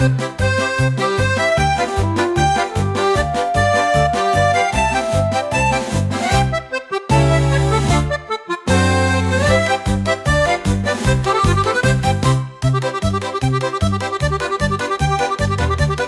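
Nothing is technically wrong with this audio.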